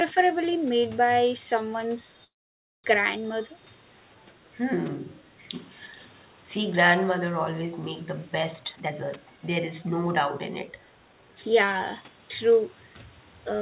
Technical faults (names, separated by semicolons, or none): call audio freeze; echo leak; jitter buffer speed-up